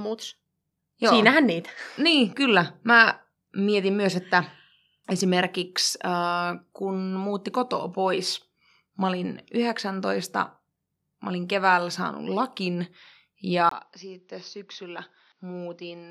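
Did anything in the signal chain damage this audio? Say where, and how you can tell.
Yes. At 13.69 s a 20 ms gap appears. From then to the end, the speech loses everything above 6.4 kHz, drops roughly 10 dB, and sits on a new, faint noise floor. This likely means the input switched to a poorer device. A codec bandwidth change would not also shift the level and background noise.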